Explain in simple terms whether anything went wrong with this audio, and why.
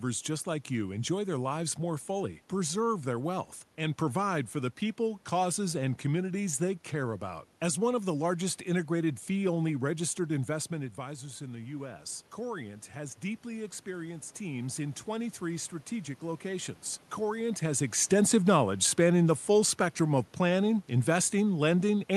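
From 10.75 to 16.72 s the voice and room noise slowly swell louder together: automatic gain rising, as the system boosted the level after the talker moved away around 10.5 s.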